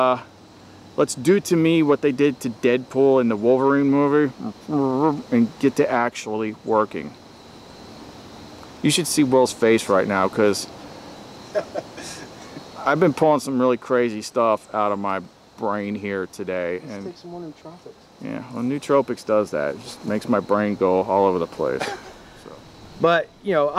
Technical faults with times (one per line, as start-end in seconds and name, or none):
none